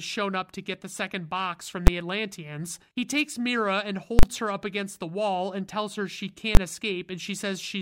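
A calculation in this speech clip produced invalid numbers at full scale, so whole blocks were pinned to one extreme value. It sounds like a single bang at 1.87 s after "the second box from", a slam from 4.19 to 4.23 s before "her up against the", and another at 6.55 to 6.57 s after "and tells her she".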